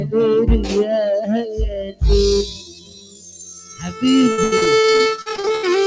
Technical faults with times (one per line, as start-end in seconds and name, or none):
0.00-5.87 noise suppressor applied to music or sounds
1.23-5.87 time-stretched section
1.76-2.02 sound cut by the noise suppressor
2.46-4.03 sound cut by the noise suppressor
4.32-5.65 repeated packet loss (robotic sound)